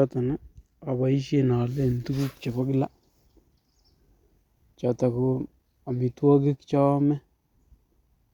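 Nothing in the speech here trips the ear; there's no fault to point to anywhere in it.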